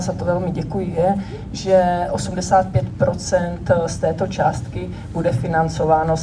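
Nothing in this one trips the ear; there's no moment where anything goes wrong with the sound.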